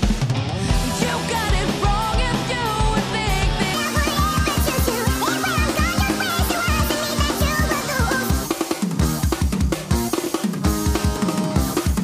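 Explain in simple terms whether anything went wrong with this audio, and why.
From 3.74 s to the end, everything suddenly runs 1.6 times too fast and sits roughly seven semitones higher, so the sound turns hurried and squeaky. This is a section at the wrong speed. Because speed and pitch jump together at one moment, the likely cause is that this stretch was played back or edited against the wrong clock, racing through the material instead of matching the timing of the first part.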